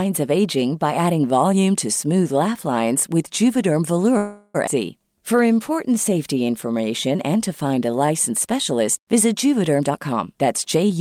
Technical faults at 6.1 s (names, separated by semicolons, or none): jitter buffer slow-down